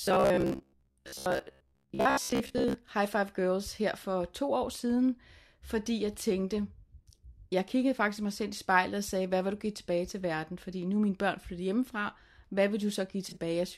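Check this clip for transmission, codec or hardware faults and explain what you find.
Two faults stand out: a robotic stretch at the start and a brief concealed dropout near the end.

From 0.02 to 2.74 s the speech turns into a rigid metallic buzz at 66.7 Hz. This is robotic sound from repeated short buffers. Audio likely arrived too seldom, so a 15 ms chunk was replayed while most of the real signal was skipped. On a spectrogram, evenly spaced harmonic lines at 66.7 Hz multiples replace the normal pitch harmonics. The waveform shows a strongly periodic, repeating shape.

From 13.29 to 13.37 s there is a corrupt frame concealed: the decoder caught damaged data and covered it, over a span that fits about three AAC frames. The spectrogram shows a blurred or empty vertical band with no broadband spike.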